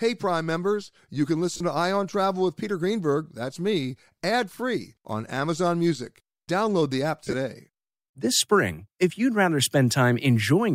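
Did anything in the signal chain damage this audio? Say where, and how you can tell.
Yes. Lost LE Audio frames at 1.54–1.61 s, after "members you can", and 7.24–7.34 s, after "the app": the Bluetooth link dropped scattered frames, and LC3 concealment smeared the repeated spectrum into brief noisy gaps.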